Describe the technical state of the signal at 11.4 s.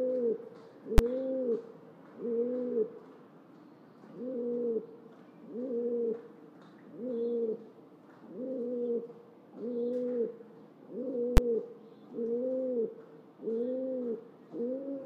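Invalid numbers at full scale strike at 11.37 s. A calculation went infinite or invalid, and for a block of about 10 ms those values were forced to one extreme value, pinning the output far from zero and beyond the audio's peaks. Because the block is so short, it comes across as a single loud bang.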